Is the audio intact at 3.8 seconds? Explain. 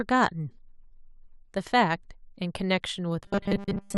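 No. From 3.24 s to 3.98 s the speech has robotic sound from repeated short buffers. New audio most likely arrives too seldom, so the same 5 ms stretch is replayed over and over while most of the real signal is skipped. That repetition stamps a fixed 200 Hz buzz onto the voice, making it rigid and metallic while the syllable rhythm still loosely comes through. Unlike dropouts, there are no gaps of silence, only a steady buzz over the voice.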